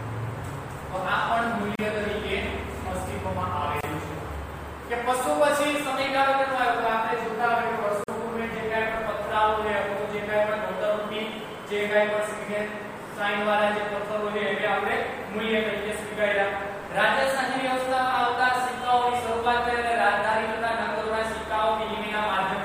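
Gaps at joins of encoded pieces occur at 1.75 s (36 ms), 3.81 s (26 ms) and 8.04 s (45 ms): separately encoded segments were spliced untrimmed, so encoder start delay and final-frame padding leave short holes, edge-smeared by the codec, before the sound resumes where it stopped.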